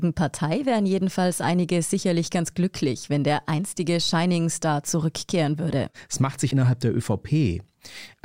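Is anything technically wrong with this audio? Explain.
No, nothing technically wrong can be heard here.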